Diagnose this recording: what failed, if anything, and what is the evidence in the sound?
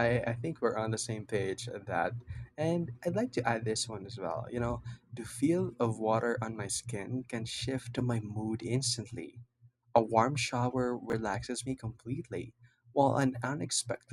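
A brief jumbled stutter between 11.10 and 11.13 s, after "warm shower" and before "me completely", comes from chunks out of order at the driver or buffer stage. One block, which fits 10 ms chunks, played about two blocks late, leaving three hard joins.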